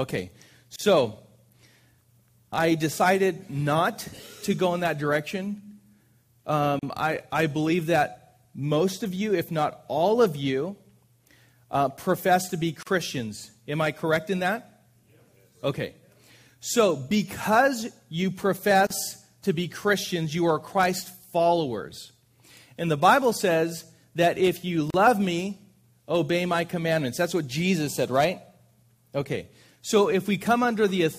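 At 0.76, 6.79, 12.83, 18.87 and 24.90 s, a gap at a join of encoded pieces interrupts continuous sound every 6 s. Each join kept the encoder's start delay and final-frame padding, leaving a 33 to 37 ms gap with smeared edges, so the silent part is shorter, before the sound resumes where it stopped.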